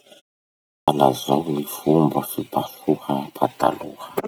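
At 0.54 s, after a 0.41 s pause, the output device is still waking, so a clipped start swallows 336 ms of speech until 0.88 s. The word bursts in abruptly. The waveform jumps from flat silence to full level, with no onset on the spectrogram.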